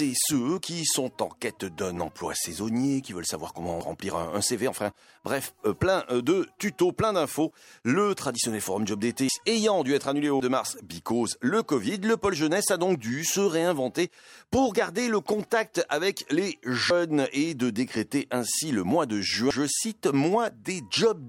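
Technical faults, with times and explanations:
3.81 s, dropped buffer (overrun): an abrupt forward jump in the sound and no gap of silence, as roughly a fifth of a second is missing. The likely cause is samples overwritten before the program read them, splicing the surviving sides directly together.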